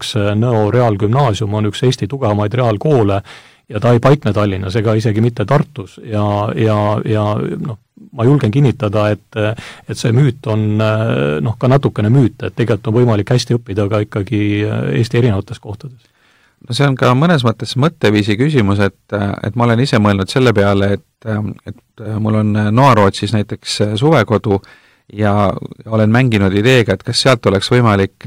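Speech runs through the whole clip with hard clipping on every loud syllable: the signal was pushed about 9 dB past what a gain stage or converter could pass, so the peaks are sliced flat. Only a small fraction of samples hit the ceiling, so the damage is a crackly edge on stressed sounds rather than constant fuzz. Soft saturation would round those peaks into warm thickening, but these flat tops throw off bright, gritty harmonics high in the spectrum.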